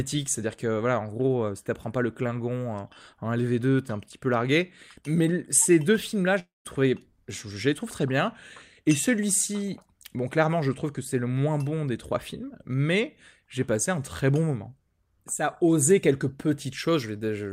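At 6.39 s the speech suddenly gives way to a smeared buzz that trails off, then about 170 ms of near silence before it picks up again at 6.67 s. That's a long network dropout, most likely: packets stopped arriving, so the receiver stretched the last bit of sound to cover the gap until it ran dry. When the audio returns it jumps ahead, with roughly a quarter-second of speech gone for good.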